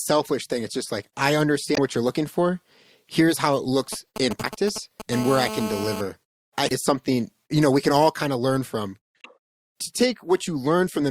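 Corrupted bytes in the compressed stream make the decoder misread frames and hunt for the next header. This damaged data is heard as a short chirp or squawk at 1.74–1.78 s, between "it's just like I" and "what you're looking for", and again at 4.40–4.44 s, 6.68–6.72 s and 9.21–9.26 s, the last just after "kind of learn from".

Between 3.93 and 5.02 s, just after "how it", a nearby 2G phone sending only sparse signalling bursts has its radio pulses rectified by the audio circuit. These GSM signalling bursts give a galloping dit-dit-dit of brief 217 Hz buzzes, roughly 10 dB below the speech.

From 5.12 to 6.01 s the phone is transmitting in bursts as in a call, pulsing 217 times a second. This GSM phone buzz is a steady, hard, raspy 217 Hz tone rich in harmonics, unrelated to the speech, about 10 dB below it.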